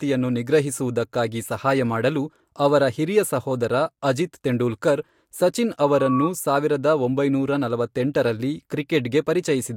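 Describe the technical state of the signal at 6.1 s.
At 6.1 s, a microphone is re-amplifying its own loudspeaker, and the loop gain exceeds one near 1.1 kHz. That loudspeaker feedback squeal swells in about a third of a second, after "ತೆಂಡೂಲ್ಕರ್ ಸಚಿನ್", to roughly speech level, lasting 5.85–6.30 s.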